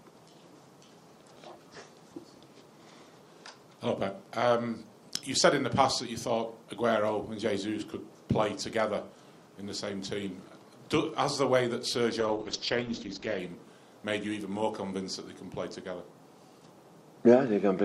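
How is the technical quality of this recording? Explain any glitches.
One glitch stands out, a call bitrate drop from 12.21 to 13.45 s. The call's bandwidth estimate fell, so the encoder was told to spend far fewer bits. The sound points to a fall from around 96 kbps to about 9 kbps, held at its lowest for about 1.2 s. At that rate the encoder codes coarsely and trims the top end, from 20 kHz down to 8 kHz. The audio turns dull, rough and watery until the bitrate recovers.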